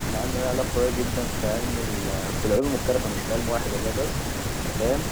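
Nothing technically wrong turns up in this bit of speech, so there's no fault to point to here.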